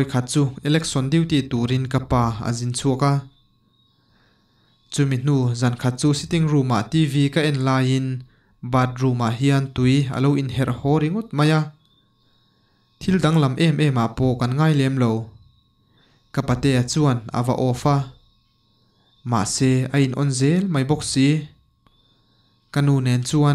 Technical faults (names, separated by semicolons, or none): none